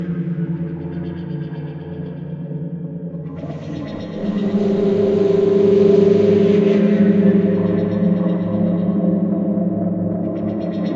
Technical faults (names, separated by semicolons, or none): none